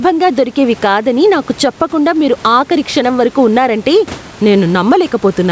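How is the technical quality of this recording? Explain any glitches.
The recording is marred by gain pumping that runs through the whole clip, over a call path whose bandwidth stops at 8 kHz. The pumping appears throughout. The background swells up in every gap and drops by around 10 dB whenever speech gets loud, likely because a fast limiter is riding an over-high microphone gain. On a waveform the envelope looks flattened, with the noise floor rising between phrases. A spectrogram shows the background brightening in the pauses.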